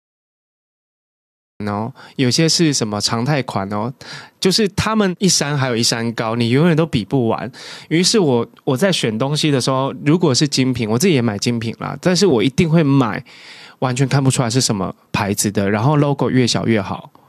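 The recording or stream began late, a cut-off start, so the capture missed the beginning of what was being said in this speech clip. The first 1.60 s are pure digital silence, and at 1.60 s the speech appears abruptly partway through a sound, with no natural attack or fade-in. The opening is clipped off rather than building up, so the first audible moment sounds truncated and sudden.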